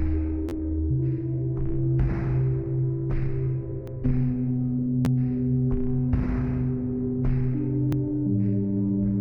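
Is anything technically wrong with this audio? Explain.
Yes. Two kinds of fault are audible: a repeated buffer twice, and overlapping chunks twice.

The first repeated buffer runs from 0.49 to 0.52 s. A piece about 11.6 ms long plays three extra times, which fits a 512-sample buffer. New audio did not reach the device in time. So it replayed what it already held. Each repeat meets the next with a hard join, giving a quick buzzy stutter. Around 40 ms of real audio is lost there. A second repeated buffer comes at 5.05 s. It has one extra play and loses roughly 10 ms. It is heard as a single click.

Overlapping chunks occur from 3.87 to 3.92 s and from 7.92 to 7.97 s. The audio was handled in 4-second chunks. Each chunk began 50 ms before the previous one finished. So that 50 ms sounds twice at each join. The result is a brief stutter on a regular four-second spacing.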